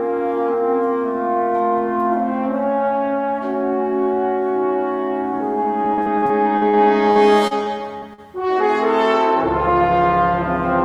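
From 5.63 to 8.21 s there is repeated packet loss with a robotic sound. Thirteen holes, the longest 46 ms, are patched by repeating the preceding sound, so it turns choppy and robotic. A spectrogram shows smeared, copied slices between abrupt breaks.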